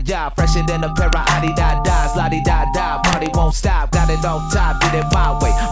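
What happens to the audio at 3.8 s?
Nothing goes wrong at 3.8 s; the audio at that moment is intact, with no audible fault.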